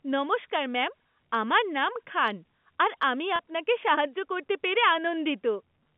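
At 3.36 s, right after "নাম খান আর আমি" and before "আপনাকে সাহায্য করতে পেরে", there's a packet loss with pitch repetition: about 30 ms went missing, likely one dropped packet, and the receiver looped the last pitch cycle over the gap, so you hear a brief, slightly buzzy hold on the G.711 phone line.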